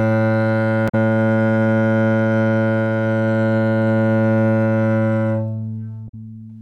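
A clip of sounds shows damaged data in a compressed stream twice, from 0.85 to 0.94 s and from 6.05 to 6.14 s. At both points part of the encoded data is corrupt, so the decoder cannot read those frames properly, loses its place and has to hunt for the next valid frame header before normal decoding resumes. Each time this is heard as a brief chirp, squawk, click or short hole lasting roughly 90 ms.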